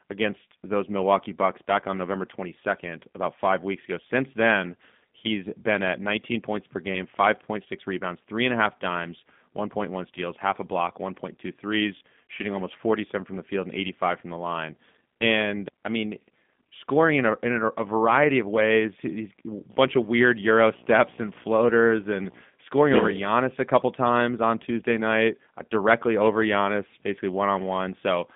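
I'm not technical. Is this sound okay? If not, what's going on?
No. Two problems are audible. The whole clip has passed through the G.729 codec, a low-rate internet-phone system that rebuilds speech from a simplified model of the voice. The sound is narrow like a phone line, roughly 150 Hz to 3.6 kHz, with nothing above about 3.8 kHz, and it has a plainly rough, synthetic edge.

From 19.70 s to 22.41 s there is video or display buzz, where a screen or video cable leaks into the audio. It is a buzz repeating about 60 times per second (59.94 Hz) with hiss-like hash over it and a very high whine at 15.7 kHz, sitting well below the speech.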